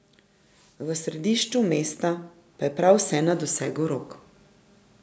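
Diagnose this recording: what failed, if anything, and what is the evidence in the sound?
The call processing's automatic gain rising fault: the gain control judged the input too quiet and ramped its gain up by about 6 dB between 0.77 and 4.1 s. The speech and the background noise swell together over those three seconds.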